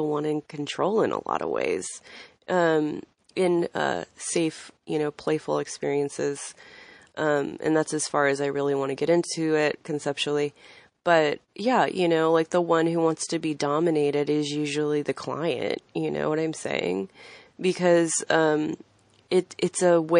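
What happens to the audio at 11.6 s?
Pre-echo sits from 11.54 to 11.56 s, just before "yeah you know like". A short hiss, about 11 dB above the quiet, leads the attack by some 21 ms. The codec spread its noise across a long block, roughly 52 ms, and never switched to short blocks. So the onset sounds soft and smeared. Underneath, the whole speech clip is watery and swirly, with chirpy s sounds. That is likely MP3 compression, and the damage fits a low bitrate around 40 kbps.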